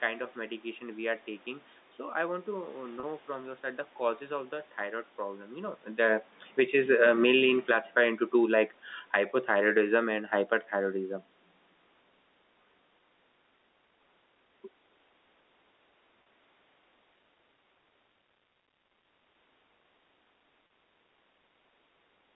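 At 3.00 to 3.03 s, just before "from your side the", a packet loss with pitch repetition occurs. About 30 ms of audio went missing, and the receiver filled the hole by repeating the last pitch period. The result is a brief held, slightly buzzy tone instead of a dropout. The same short concealment recurs at 16.23 to 16.26 s and 20.67 to 20.70 s.

Between 6.44 and 11.25 s the automatic gain control is falling. Having judged the input too loud or its background noise too strong, it pulls its gain down gradually by about 11 dB, so the speech and the room noise behind it sink together over those five seconds.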